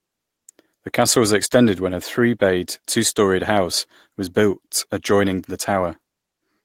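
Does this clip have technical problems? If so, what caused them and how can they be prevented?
No, there's nothing technically wrong to point to here, so there's no cause to track down and nothing that needs preventing.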